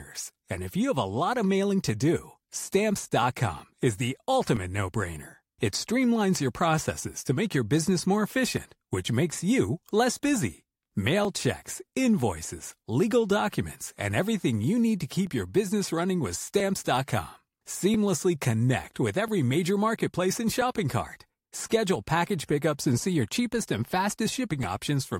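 From 0.55 s to 24.63 s a click lands every 1.34 s, likely clock drift buffer slips: mismatched clocks make a block drop or repeat.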